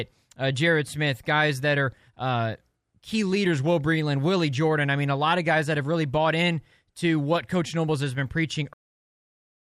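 At 8.73 s, just after "has been preaching", the speech stops mid-sound and falls straight into digital silence with no decay. This is a cut-off end: the final stretch of audio was never written or played out, leaving silence to the finish.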